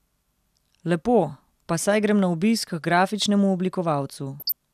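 From 4.40 to 4.54 s, bit errors from weak reception slip past error correction into the MP2 data, corrupting samples, which puts short blips of noise in single sub-bands, and scale factors, which make sub-bands jump in level for up to a frame. This DAB burbling lays a brief burble over the speech.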